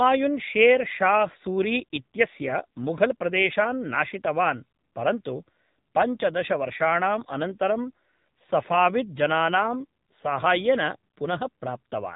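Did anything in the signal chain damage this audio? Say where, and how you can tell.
Yes, at the codec stage: an AMR narrowband mobile codec has processed the speech throughout. Nothing passes above about 3.8 kHz, and the voice has a plainly audible buzzy, synthetic edge, which fits a low AMR-NB mode around 7.4 kbps. The codec rebuilds speech from a vocal-tract model fed by sparse pulses in 20 ms frames. A plain low-pass filter or analogue phone line would only dull the sound, not add this artificial, pulse-driven texture.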